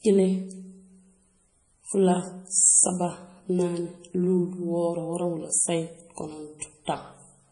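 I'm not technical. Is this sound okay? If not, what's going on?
No. Across the whole speech, the treble stops sharply at about 10.5 kHz, and faint detail flickers in and out, giving a watery, swirly texture with metallic chirps on s sounds. That points to heavy MP3 compression, likely from an encode squeezed very small.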